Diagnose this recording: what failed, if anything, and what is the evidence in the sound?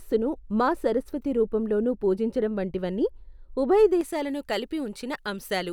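De-emphasis applied wrongly at playback, 0.0 to 4.01 s: an unneeded treble cut muffles the speech, and the spectrogram fades smoothly upward, about 11 dB down at 10 kHz.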